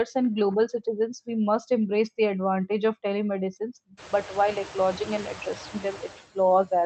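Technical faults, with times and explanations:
Throughout, noise suppressor artifacts: the suppressor lowers steady noise by about 11 dB per frame, so the floor drops between phrases and returns under them. After room noise rises about 25 dB near 4 s, a spectrogram shows speckled, fluttering residue and pumping waveform gaps.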